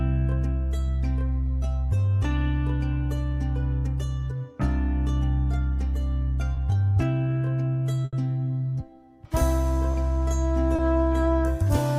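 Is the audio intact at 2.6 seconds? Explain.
Yes, the audio is intact at 2.6 seconds, with no dropout, distortion, glitch or other fault at that moment.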